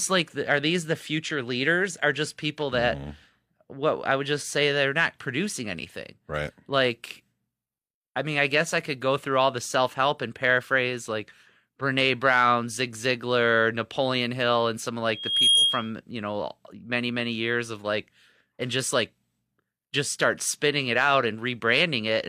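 At 15.13 s a loudspeaker feedback squeal begins: a microphone hears its own loudspeaker and the loop runs away at 3.3 kHz, climbing over roughly 0.4 s to a few decibels above the speech before stopping at 15.90 s. Unlike a steady interfering whistle, it swells out of nothing.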